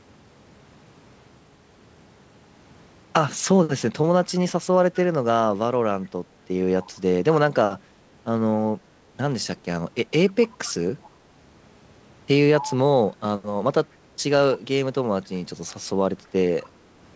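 Short bursts of echo leak appear at 6.82–6.91 s, 10.27–10.47 s, 10.64–10.74 s, 11.03–11.10 s, 12.59–12.76 s and 16.24–16.28 s. Each is a faint copy of the speech trailing it by 248 ms, mostly around 25 to 30 dB down. The one at 12.59 s is louder, near 15 dB below, and the one at 16.24 s is barely audible. The likely cause is a loudspeaker at the far end whose echo canceller let scraps of its own microphone pickup return down the line.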